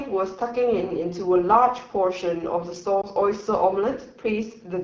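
Throughout the clip, the AMR wideband (HD Voice) codec runs at one of its lowest rates, which fits the 8.85 kbit/s mode. At that rate the coder has too few bits to model the pulse excitation and vocal tract shape accurately, and the band above 6.4 kHz is only shaped noise. The speech therefore sounds rough and raspy, and the codec damage is plainly audible from start to finish.

From 3.01 to 3.06 s, the speech is hit by lost AMR speech frames. What can be heard fits a single frame of about 20 ms failing its checksum, so the decoder filled the gap by repeating the last good pitch and vocal tract settings at reduced gain. The result is a brief dip or warble in the speech, followed by a moment of weaker, rougher sound as the decoder recovers.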